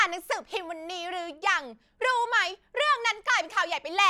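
Nothing in this speech recording stands out as a technical fault; it just runs along without any glitch worth pointing to.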